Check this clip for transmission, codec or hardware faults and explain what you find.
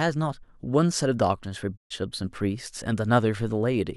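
One fault is present, a digital broadcast dropout. From 1.76 to 1.92 s the speech fades to silence over about 20 ms and stays muted before resuming. The receiver lost valid frames and muted until good ones returned. The 128 ms gap fits four lost frames, and that stretch of programme is gone.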